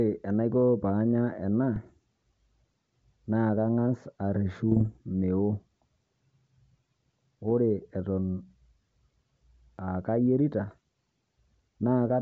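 Bit errors on an ADPCM link hit the speech at 1.76–1.90 s, 4.71–4.86 s, 7.50 s and 10.66–10.78 s, just after "aa kayeerita". Flipped bits throw the decoder's step size and predictor off track, so each burst pops and rasps with brief level jumps.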